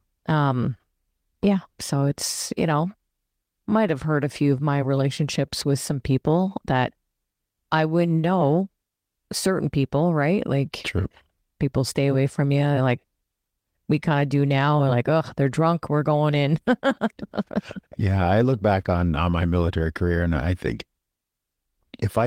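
A speech recording, with no technical fault to be heard anywhere in it. Nothing in the audio calls for a time or a cause to be noted.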